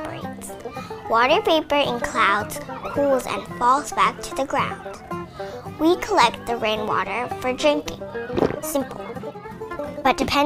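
From 8.50 s to the end of the clip at 10.46 s, the audio jumps to roughly 1.52 times its earlier pace while the pitch stays where it was, the signature of a time-stretched section. The passage sounds rushed, with short segments dropped to compress the timing. The likely cause is software squeezing that final stretch to fit a shorter duration, shortening it without shifting its pitch.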